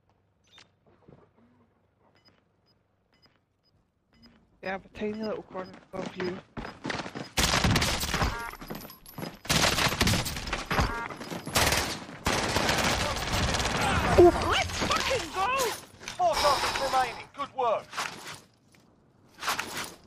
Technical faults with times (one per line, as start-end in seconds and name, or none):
18.04-18.12 chunks out of order